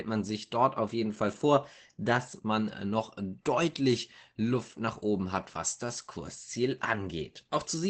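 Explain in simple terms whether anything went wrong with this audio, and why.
Yes, something went wrong: the speech carries Opus voice compression damage from start to finish, and it is plainly audible. To save data, the codec rebuilds the voice from a simplified model and stops at about 8 kHz, so the top sparkle is missing. The voice sounds muffled, a little hoarse and faintly robotic. A simple treble cut would only dull the sound. This rough, synthetic texture points to a low-bitrate voice codec.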